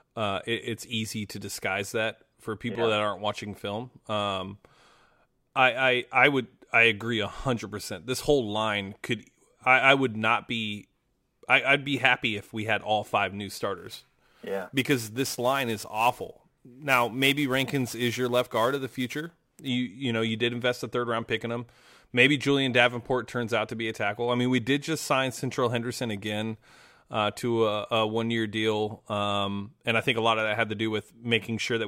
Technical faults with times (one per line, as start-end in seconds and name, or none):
13.78-19.68 sample clock jitter